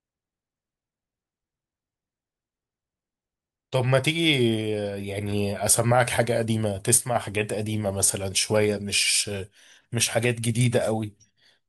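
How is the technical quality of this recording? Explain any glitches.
The recording has one glitch in the speech. From 6.98 to 7.16 s the level drops abruptly by about 6 dB for 0.18 s, then returns. This is likely one channel dropping out before a mono sum. Unlike a full dropout, the sound never goes silent, and the step is sudden rather than a smooth gain dip.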